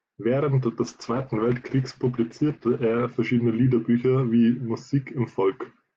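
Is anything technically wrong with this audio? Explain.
Yes, there's a call bitrate drop running from about 0.85 s to 5.09 s. The call's bandwidth estimate fell, so the encoder got squeezed and had to code the speech much more coarsely. The top end closes in from around 20 kHz down to 8 kHz, so things go muffled and rough and watery, bottoming out for roughly 2.2 s. That sounds like a fall from about 48 kbps to somewhere near 11 kbps.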